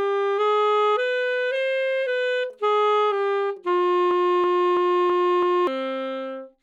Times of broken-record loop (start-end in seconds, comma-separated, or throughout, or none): 4.11-5.67